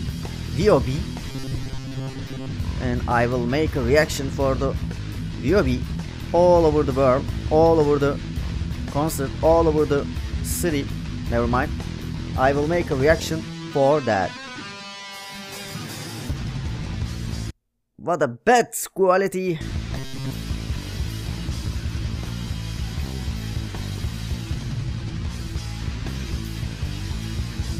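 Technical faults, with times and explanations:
1.29–2.52 s and 19.98–20.31 s, robotic sound from repeated short buffers: the audio turns into a rigid, metallic buzz pitched at 133 Hz that only loosely tracks the underlying sound. This is likely caused by new audio arriving too seldom, so playback keeps looping the last fragment of about 7.5 ms while most of the real signal is skipped. Because each repeat has the same length, the loop imposes its own fixed buzz at 133 Hz.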